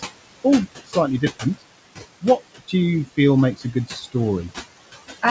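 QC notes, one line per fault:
throughout: noise suppressor artifacts. The room noise, sitting about 10 dB below the speech, is pulled down by about 17 dB in the gaps and comes back up under the talking, so the floor pumps with every phrase. The suppressor decides per band and per frame what counts as steady noise.
0.86–0.96 s, 1.21–1.62 s, 3.56–4.15 s: speech cut by the noise suppressor. In these spots the suppressor mistook quiet speech energy for background and attenuated it by about 17 dB in the first two and about 18 dB in the third, just after "you feel". Soft consonants and trailing syllables sound swallowed or faint. The first two lose roughly a tenth of a second of speech each, and the third roughly 300 ms. The cuts come from the gain mask closing on low-level speech, which sits near the noise floor here.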